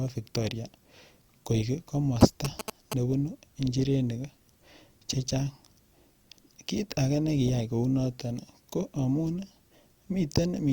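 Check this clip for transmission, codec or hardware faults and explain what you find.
One hardware fault is present. GSM signalling bursts from 2.21 to 2.94 s: a nearby 2G phone's radio bursts, rectified by the audio circuit, give galloping ticks and 217 Hz buzzing almost as loud as the speech.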